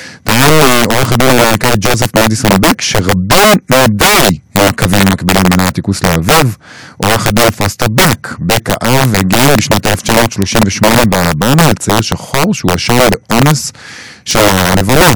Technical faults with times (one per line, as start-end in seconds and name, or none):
0.00-15.16 integer overflow